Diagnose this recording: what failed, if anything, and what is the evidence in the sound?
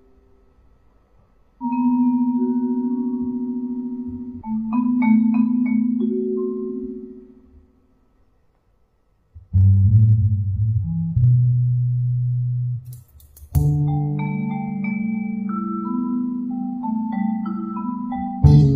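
Brief glitches break into the sound at 1.58–1.63, 4.37–4.42, 10.73–10.79, 12.73–12.75 and 18.58–18.64 s. This is damaged data in a compressed stream, a codec or storage fault: corrupted frames decode as garbage until the decoder resynchronises on the next valid frame header.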